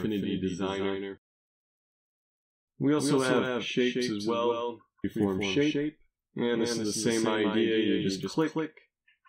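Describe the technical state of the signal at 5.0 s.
Damaged data in a compressed stream at 5.04 s: corrupted frames make the decoder lose sync and hunt for the next header, giving a brief blip. A doubled audio track runs throughout, with a dry, full-band copy about 200 ms behind and roughly 5 dB quieter, likely from a second, slower capture path.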